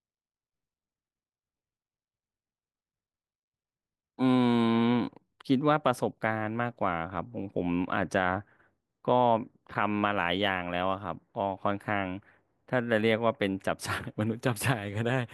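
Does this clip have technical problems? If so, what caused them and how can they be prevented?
No, this clip has no technical problems, so there is nothing to trace to a cause or to prevent.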